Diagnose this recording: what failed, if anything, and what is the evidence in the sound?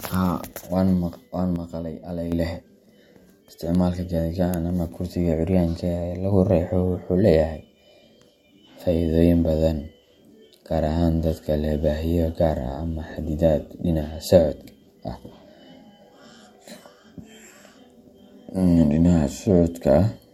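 A sudden gain jump, likely a digital gain change applied without a ramp in call processing. At 1.56 s, speech and background noise drop together by about 6 dB, recovering at 2.32 s. At 6.32 s, both step up about 4 dB and stay.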